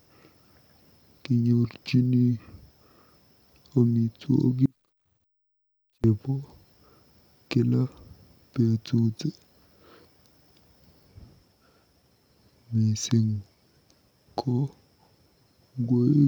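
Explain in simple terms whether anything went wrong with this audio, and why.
From 4.66 to 6.04 s the speech abruptly drops to a very faint trace for about 1.4 seconds. This audio dropout to a faint residue is likely a brief signal loss.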